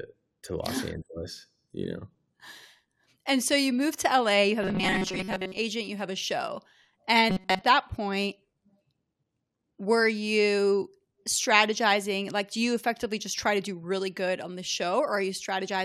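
Robotic sound from repeated short buffers at 4.63–5.57 s and again at 7.30–7.61 s, just before "that point": the speech turns into a rigid metallic buzz at 188 Hz, likely from audio arriving too slowly, so a 5.3 ms snippet repeats in place of most, then nearly all, of the real signal.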